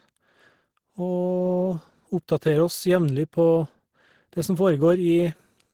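At 5.38 s, and again from 5.71 to 5.73 s at the very end of the speech, there is a brief smear or wobble: short concealed packet loss. Audio missed the decoder in time, so the receiver extended the preceding sound to bridge each gap.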